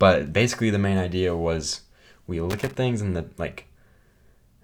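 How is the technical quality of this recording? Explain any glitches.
There is one glitch: loose connector crackle from 2.50 to 2.77 s, just after "main idea was we" and before "things and the". A quarter-second burst of irregular scratching chops the speech as a worn contact rapidly makes and breaks the signal path.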